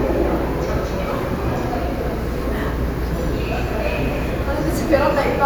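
No technical faults can be heard in this audio.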